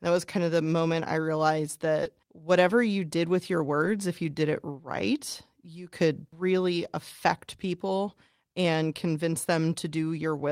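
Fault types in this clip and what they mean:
Short concealed packet loss: About 20 ms of audio after "the moment I realized" arrived too late, and the receiver filled it by extending the preceding sound. A spectrogram shows smoothly stretched harmonics or noise blending back in. The waveform looks briefly repetitive rather than silent.
Lost packet rebuilt from error correction: Single 20 ms packets at about 2.05 s and 3.85 s, the latter just after "you did with your", played from a low-bitrate copy carried in the next packet. The waveform stays gapless, while the spectrogram shows rougher, noisier frames.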